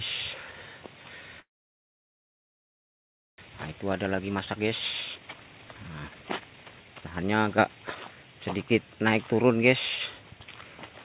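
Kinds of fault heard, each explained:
Call audio freeze: packets were likely held up and the jitter buffer ran dry, inserting about 2 s of near silence before the sound resumes intact.
Jitter buffer speed-up: to cut built-up delay, the receiver trimmed short pitch-period pieces, so the sound runs fast at unchanged pitch, 111% and later 159% speed.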